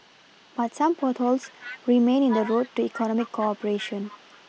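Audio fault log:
0.00–2.06 s echo leak: an echo canceller on a loudspeaker side likely let its microphone pickup through, so a faint copy of the speech trails 403 ms behind, about 25 dB down.
2.29–4.49 s echo leak: the same leak returns stronger, the 403 ms delayed copy now about 15 dB below the speech.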